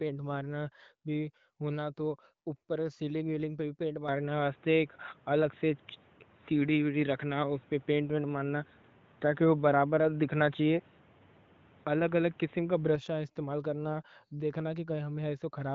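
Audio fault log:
4.08 to 12.95 s, input likely switched to a poorer device: after "ویلنگ پہ بھی پینٹ" the sound turns boxy, cut off near 3.8 kHz, about 5 dB level shift and new noise floor; spectrogram top flattens until "استعمال کرنا دیکھنا".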